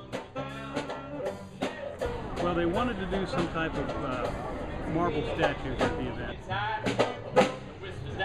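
No technical faults can be heard anywhere in the audio.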